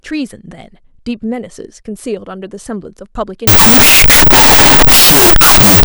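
From 3.47 s to the end at 5.85 s, a wrong sample width fault turns the speech into loud, harsh noise. The sound points to 16-bit samples being read as unsigned 8-bit. Each sample splits into two bytes. Only the high bytes keep a trace of the speech, which plays at half speed and an octave low.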